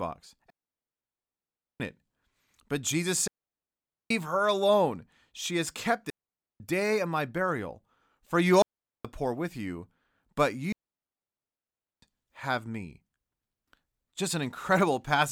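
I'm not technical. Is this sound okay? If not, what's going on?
No, the speech keeps cutting out completely. It's a digital wireless dropout: the radio link between mic and receiver lost too much data, so the receiver muted itself. You hear clean holes of silence with no crackle or hiss, at 0.5 to 1.8 s, 3.28 to 4.11 s (just before "her alone"), 6.1 to 6.6 s, 8.62 to 9.05 s, and 10.72 to 12.02 s (between "poor with you but" and "have me"). Gaps run from about 0.4 seconds to 1.3 seconds.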